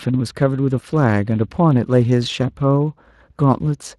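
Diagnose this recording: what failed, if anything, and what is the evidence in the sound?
Codec stage: Speex codec damage is plainly audible throughout the speech, a hoarse, noisy CELP texture from a thin excitation budget, consistent with a roughly 22 kbps setting.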